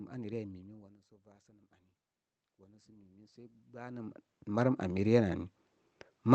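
Automatic gain rising from 2.58 to 5.47 s: the input level dropped by about 21 dB, so the gain control slowly pushed its gain up by about 12 dB, and the speech and the room noise swell together over nearly three seconds.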